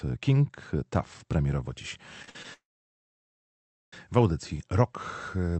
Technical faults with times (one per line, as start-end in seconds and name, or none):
2.22-2.45 repeated stalls (stutter)
2.53-3.93 call audio freeze